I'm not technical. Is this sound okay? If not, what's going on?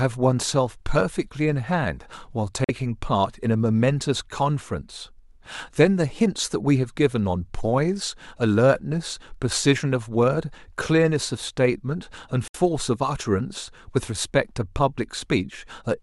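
No. The speech cuts out to silence twice, at 2.64 to 2.70 s and at 12.48 to 12.56 s. Each gap is a fraction of a second. This is likely a Bluetooth dropout: sound data reached the headphones too late and was skipped.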